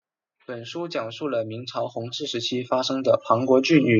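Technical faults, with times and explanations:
0.46–3.95 s, automatic gain rising: the level control judged the input too quiet and climbed about 18 dB over three and a half seconds, so the voice and background noise swell together. On the waveform the envelope widens steadily; the spectrogram brightens evenly across all frequencies, noise floor included.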